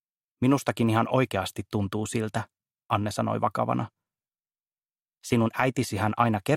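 Nothing stood out as a technical problem on listening.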